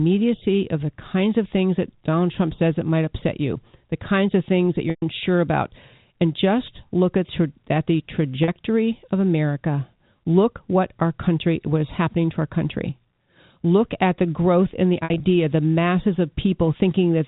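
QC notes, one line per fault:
4.90–5.02 s, packet loss with pitch repetition: about 120 ms of signal missing between "kinds of things that" and "about and just look". The receiver loops the last pitch period, so a buzzy held tone fades toward silence before a short cross-fade back in.
8.44–8.48 s, packet loss with pitch repetition: a 40 ms gap after "at the". It is short enough that the repeated pitch period simply sounds like a briefly held, slightly buzzy sound.
15.04–15.20 s, packet loss with pitch repetition: 100 ms lost in separate runs scattered over 160 ms between "the growth in the" and "the masses". The longest run is 60 ms, so the repeated pitch period fades toward silence there before a short cross-fade back in. The band-limited G.711 telephone coding underneath carries through these repairs.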